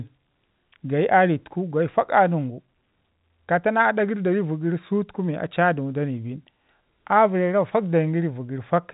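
The speech carries the band-limited character of G.711 A-law telephone coding, with nothing above 3.8 kHz, as fits a 64 kbps line, and no fault can be heard anywhere in the recording.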